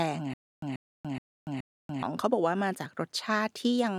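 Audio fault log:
0.34–2.03 s, stutter with silent gaps: the same 135 ms speech fragment repeats four times with 288 ms of dead silence between, likely a stalled stream replaying its last fragment.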